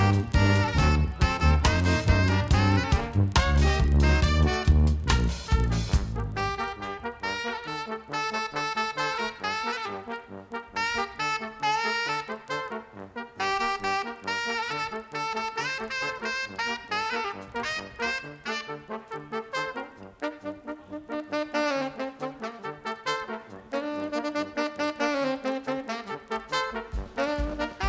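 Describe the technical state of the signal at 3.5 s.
At 3.5 s the resampler restarted on every block, as it does throughout the clip. The 44.1 kHz to 16 kHz conversion was run on each 40 ms block separately. At every block edge the converter lacked the real neighbouring samples and worked from silence or the block's opposite end, which leaves a small error at each boundary. The result is a regular disturbance at 25 Hz, the block rate, which is present only while there is signal.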